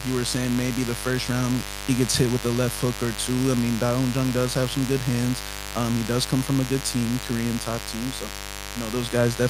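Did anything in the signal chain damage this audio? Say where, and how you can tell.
Yes: mains buzz entered the analogue wiring, audible throughout as a raspy 50 Hz buzz roughly 10 dB under the speech. On a spectrogram it appears as evenly spaced harmonic lines reaching several kHz.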